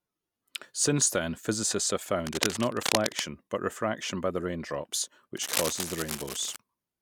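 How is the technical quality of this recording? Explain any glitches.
The recording has two bursts of cable scratch noise. The first runs from 2.27 to 3.32 s, after "then physicists have", and the second from 5.37 to 6.56 s, after "refraction by the raindrops". This is likely a worn cable or connector being moved, so its contact resistance fluctuates rapidly. The result is dense, ragged scratching, about as loud as the speech in the first burst and slightly quieter in the second.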